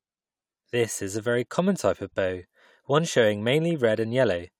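No technical faults are audible anywhere in the speech recording.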